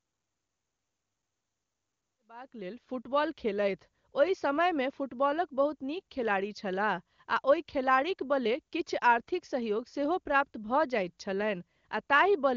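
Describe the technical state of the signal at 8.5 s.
At 8.5 s the speech signal is intact, with no audible fault at that moment.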